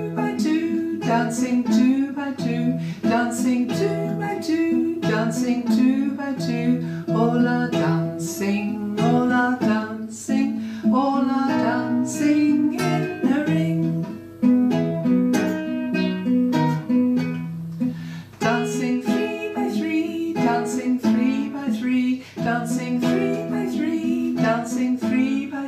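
No technical faults are audible anywhere in the audio.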